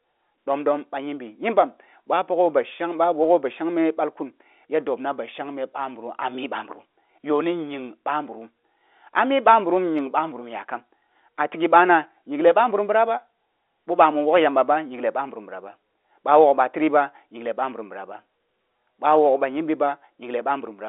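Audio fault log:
No faults are audible in this speech recording. It carries G.711 telephone coding, with the sound held to a line band of roughly 300 Hz to 3.6 kHz and a faint, level-following grain that fits A-law at 64 kbps.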